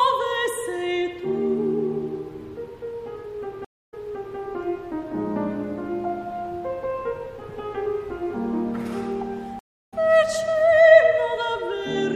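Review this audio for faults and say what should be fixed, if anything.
There are two stream reconnects. At 3.65 s the audio drops out for about 250 ms, then picks up 470 ms earlier than where it stopped, so a short stretch repeats. That means the server resent a burst once the fresh decoder started. At 9.59 s there's a 300 ms gap, and it resumes roughly a fifth of a second later, skipping that material. A bigger client buffer with automatic retry and proper resume-position handling would hide these drops.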